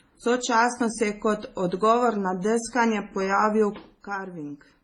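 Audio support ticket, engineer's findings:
Throughout: dull speech, nothing above 11.2 kHz, two layers of compression artefacts audible together. Likely transcoding between lossy codecs: low-rate MP3-style coding re-encoded as HE-AAC, which fits roughly 24 then 40 kbit/s.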